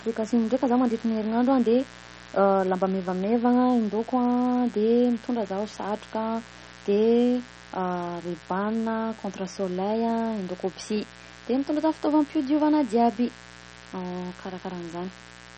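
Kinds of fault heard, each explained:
Mains buzz: a steady, raspy 60 Hz buzz runs through the speech at about 20 dB below it, switching spikes spreading harmonics well up the spectrum.
MP3 compression: plainly audible watery, swirly speech with nothing above 8.4 kHz, likely a low-bitrate MP3, around 32 kbps, starving weak frequency lines.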